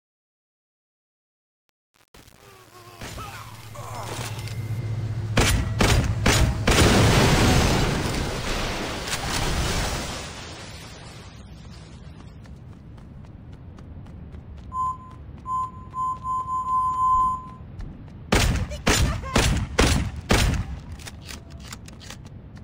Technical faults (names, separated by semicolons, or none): truncation distortion on a fade